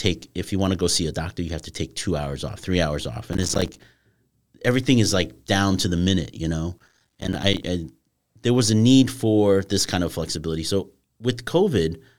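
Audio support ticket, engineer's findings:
Processor overload crackle, 3.31–3.84 s, after "off three hours off", and 6.79–7.63 s, after "the minute you know". Gritty tearing over the speech, made of dozens of tiny hard-edged silent gaps. Consistent with buffers of roughly 5 ms repeatedly missing their deadlines while the processor is overloaded, each unfinished buffer output as silence. Crackle stops once the load passes. Suspect CPU load on the audio processing thread.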